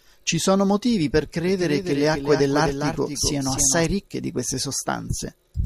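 A speech clip with a doubled audio track from 1.46 s to 3.86 s, after "sono motivi per" and before "ricche di queste". A dry copy trails about 300 ms behind, roughly 5 dB quieter. It starts and stops abruptly. A second, slower capture path is the likely cause.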